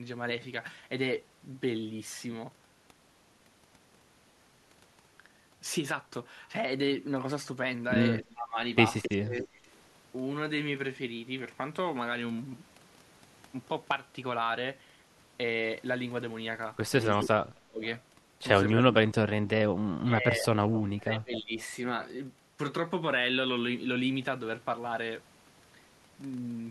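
At 8.19–8.31 s an echo leak appears. A copy of the speech returns 267 ms late, about 20 dB down. This is likely a loudspeaker echo that one end's canceller missed. Speech suppressed in double talk follows at 8.33–9.48 s. The voice dips in pieces for about half a second in total, up to about 20 dB. The canceller likely confused the talker with echo while both sides spoke. Echo returns at 9.02–9.58 s, louder, about 10 dB down. Suppression recurs at 17.14–17.82 s, dropping up to about 30 dB. Faint echo follows at 18.68–18.72 s. Suppression then runs through 18.79–21.55 s, about 1.5 s affected, up to about 25 dB. Echo scraps appear during it at 20.74–20.78 s and 21.36–21.61 s, about 20 and 15 dB down, still 267 ms behind.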